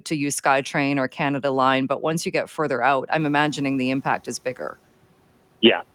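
A speech clip in which, just after "you get further out", a sudden rise in room noise of about 22 dB around 3 s, to roughly 24 dB under the speech, is heard briefly with less reduction, then sinks back between 3.19 and 4.28 s. This is the noise suppressor catching up: its noise estimate lags the jump and takes 1.09 s to adapt, after which it cuts the noise by about 9 dB.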